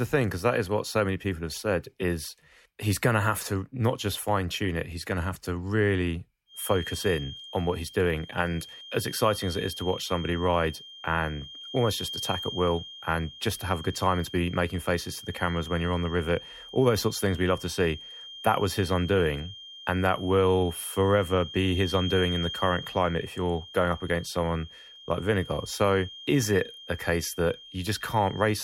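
From 6.45 s to the end, a feedback whistle sits behind the speech. It is a thin, steady tone at 3.2 kHz, well below the speech level, swelling and fading slowly in level. The likely cause is a loudspeaker-to-microphone loop held just at the edge of feedback.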